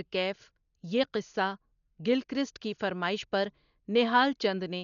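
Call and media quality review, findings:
Dull, band-limited speech throughout; rough, fluttering noise around voiced tones. Spectrogram: hard ceiling near 6.9 kHz, speckled noise between harmonics. Likely Dolby Digital compression at a starved rate, fitting about 48 kbps; frequency lines left without mantissa bits, refilled with decoder dither.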